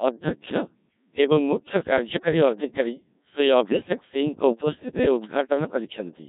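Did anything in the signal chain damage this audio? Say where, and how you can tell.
Yes. Across the whole clip the speech sounds robotic and buzzy, with a synthetic, sine-built quality. This is the Codec 2 vocoder at the codec stage. It transmits only pitch, voicing, energy and a spectral envelope, and the decoder rebuilds the voice from sine waves, so the original waveform never survives. The strongly degraded result points to a very low rate, around 1.3 kbit/s.

From 3.65 to 3.89 s the synthetic voice lurches in pitch, level and tone colour and briefly breaks into warbling, robotic gibberish. These are bit errors on digital voice radio, arising in the transmission stage before decoding. At such a low rate each bit helps set a whole frame's pitch, loudness, voicing or spectrum, so flipped bits corrupt entire frames. The length of the disturbance suggests about five frames hit, at an error rate of roughly one bit in ten.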